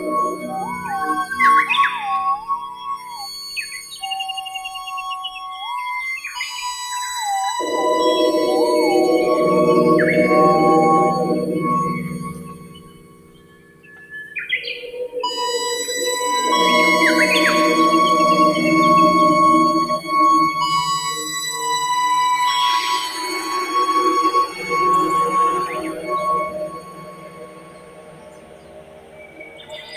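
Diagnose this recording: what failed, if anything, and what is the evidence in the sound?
The level pumps and thins throughout: held sound and decaying tails sink while sharp onsets pass, with swings of around 20 dB. This is a noise suppressor applied to music or sounds at the call-processing stage, a speech-tuned suppressor mistaking steady content for noise.

Sound cut by the noise suppressor is audible as distinct dips at 0.0–1.4, 1.89–4.0, 4.37–5.78, 6.21–6.37, 12.06–14.36, 24.47–24.68, 25.67–26.12 s and from 26.43 s to the end. The drops run from about 7 to 17 dB, deepest at 12.06–14.36 s and 26.43 s onward, as sustained passages get gated down.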